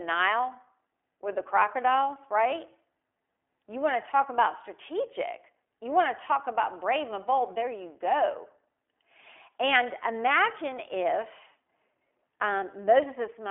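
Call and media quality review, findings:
iLBC codec, full clip: plainly audible rough, synthetic speech; nothing above 3.7 kHz, line band 300 Hz to 3.4 kHz. Each frame's excitation is coded independently, consistent with 20 ms frames at 15.2 kbps. Narrowband VoIP leg.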